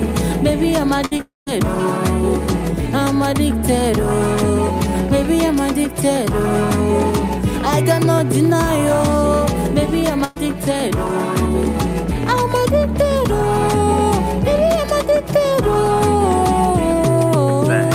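Right at 1.05 to 1.13 s there's a burst of packet loss: about 60 ms never arrived, so the receiver stretches the last sound into a fading buzz or hiss and jumps ahead. At 1.17 to 1.21 s, a short concealed packet loss hides about 20 ms behind a quick smear. From 1.21 to 1.48 s the sound trails off and then about 170 ms of silence follows, likely a long network dropout, with about 260 ms gone. At 10.24 to 10.38 s a second burst of packet loss drops about 120 ms, covered entirely by a fading continuation with no silence.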